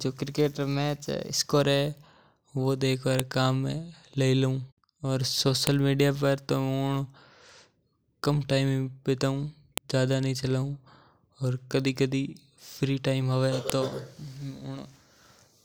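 File header played as audio, heard as sharp, loud clicks at 3.20, 5.67, 9.78 and 13.70 s in this speech clip. Each snap marks the start of a new WAV piece that was joined or streamed without its header being stripped, so those few dozen bytes of file metadata were read as sample values. Because header bytes bear no relation to the waveform, each one lands as an abrupt spike regardless of what the speech is doing at that moment.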